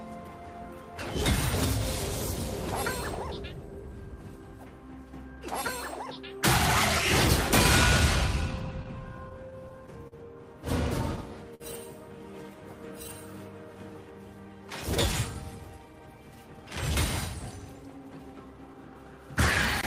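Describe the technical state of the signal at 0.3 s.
At 0.3 s the signal is intact, with no dropout, distortion or other audible fault at that moment.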